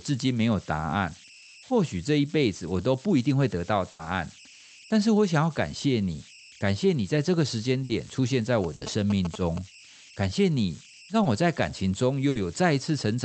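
Throughout the speech there are converter idle tones: a delta-sigma converter without dither settles into repeating bit patterns on quiet input and produces a faint whistle at roughly 3 kHz, about 21 dB below the signal. Unlike broadband hiss, it has a definite pitch and is clearest in pauses.

From 3.91 to 4.01 s, 7.83 to 7.91 s, 8.75 to 8.83 s and 12.29 to 12.37 s, a burst of packet loss interrupts the audio. The receiver holds the last sound for about 60 to 80 ms, fading it, and the speech then resumes further on with that stretch missing. The long held tail, rather than a quick blip, sets these apart from brief concealment.

From 8.64 to 9.58 s, GSM signalling bursts from a nearby 2G phone are rectified by the audio circuit. They produce a galloping dit-dit-dit of short buzzes at 217 Hz, fairly loud against the speech. This is rhythmic interference layered on top of the speech and it does not replace any of the audio. 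The 8.75 s dropout falls inside this stretch.

At 9.69 to 9.73 s and 11.23 to 11.27 s, short concealed packet loss fills about 20 ms gaps with a continuation of the preceding sound. Each is heard as a momentary smear or wobble, far shorter than the held fades of the bursts.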